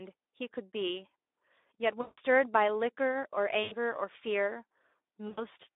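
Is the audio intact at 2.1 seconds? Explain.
No. From about 2.01 to 2.2 s, packets carrying the speech were lost, and the decoder performed VoIP packet loss concealment. It kept extrapolating from its last pitch period and spectral envelope while lowering the gain on each frame. At 2.1 s the speech is therefore stretched into a fading, buzzy or noise-like sound. The gap of roughly 160 ms fits eight 20 ms frames, and the speech stays weak and distorted just after 2.2 s while the decoder recovers.

Under that, the Speex codec damages the speech throughout, including this moment. A low bitrate, consistent with about 11 kbps, leaves too few bits to describe the excitation properly, so the speech comes out hoarse and noisy. The band is held to about 300 Hz to 3.7 kHz, giving a thin, telephone-like quality with no content above that range.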